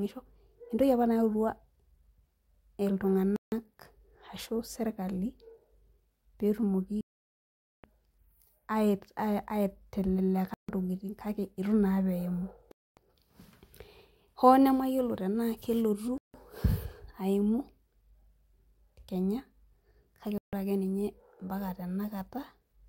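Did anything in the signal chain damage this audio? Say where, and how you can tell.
Yes, at the wireless playback stage. The speech cuts to clean silence at 3.36, 7.01 (for 0.83 s), 10.54, 12.72, 16.18 and 20.38 s, mostly for 0.15 to 0.26 s, then resumes. This is likely a Bluetooth stall: the headphone buffer ran dry while delayed packets were resent.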